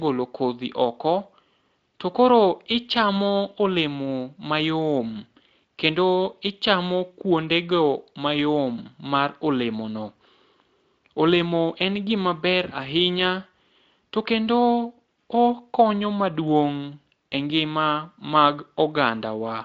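No technical faults turn up in this speech, which passes through its Speex encoding intact with content reaching up to 7.7 kHz.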